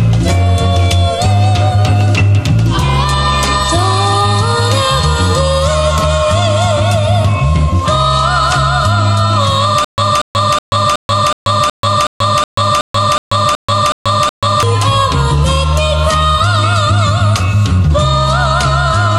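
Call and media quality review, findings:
Stutter with silent gaps, 9.85 to 14.63 s. A 236 ms burst repeats 13 times, each followed by 135 ms of digital silence, on an even 371 ms cycle. Likely a stalled player or stream buffer replaying its last fragment on each retry, then running empty. Audio for that span is lost.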